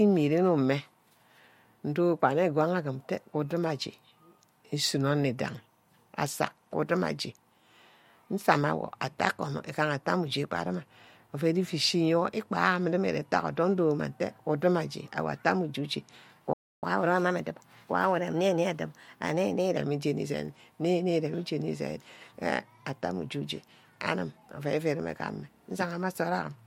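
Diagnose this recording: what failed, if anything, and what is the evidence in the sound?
A playback stall silences the speech from 16.53 to 16.83 s, about 0.29 s, at the playback buffer stage. The sound then resumes after the gap. The likely cause is the player running dry.

Catch-up at higher speed follows from 16.83 to 19.77 s. The player runs its backlog at 1.1 times speed, lifting pitch by about one and a half semitones, then snaps back to normal. Its onset right after the gap sets it apart from gradual clock drift.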